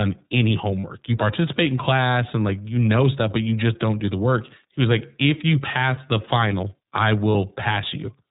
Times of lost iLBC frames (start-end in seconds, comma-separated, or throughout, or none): 0.82-0.84, 7.32-7.35